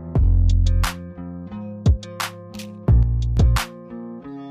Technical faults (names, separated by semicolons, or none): sudden gain jump